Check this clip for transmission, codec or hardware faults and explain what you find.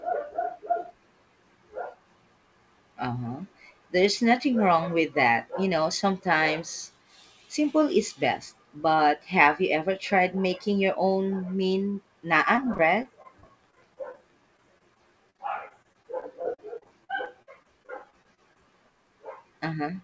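Repeated packet loss (robotic sound) affects the speech in two stretches, from 12.56 to 14.19 s and from 14.57 to 18.57 s. Packets went missing in quick succession. Each hole, up to 23 ms and then 45 ms, was patched by extending the preceding sound, making about 11% and 14% of each stretch concealed audio that sounds choppy. The call path's lack of content above 8 kHz fits a G.722 link.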